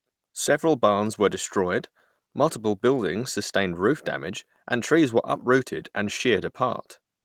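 There are no technical faults to describe in time order: the speech comes through the Opus voice compression at 24 kbps in its hybrid fullband mode without any fault to place on the timeline.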